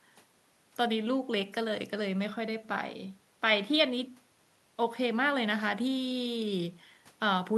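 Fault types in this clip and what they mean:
No fault can be heard anywhere in this speech clip. There is nothing to list under any fault type.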